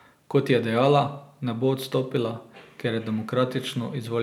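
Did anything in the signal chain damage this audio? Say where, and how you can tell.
No, nothing along the chain audibly damages this speech recording, from capture through to playback.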